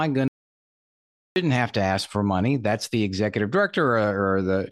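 An audio dropout to silence runs from 0.28 to 1.36 s, where the speech cuts to digital silence for about 1.08 s, likely from a lost input while recording continued.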